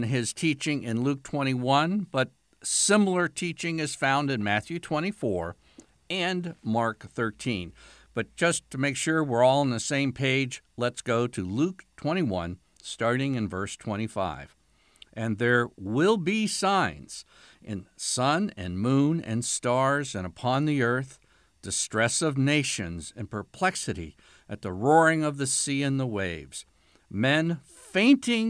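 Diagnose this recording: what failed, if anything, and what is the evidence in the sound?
Nothing failed in this recording.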